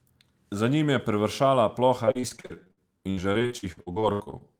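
Right after "njim je privršala", from 2.05 s to 4.42 s, there's repeated packet loss with a robotic sound. Holes up to 74 ms keep appearing, each patched by stretching the last bit of sound. About a third of that stretch is filler, so it turns choppy.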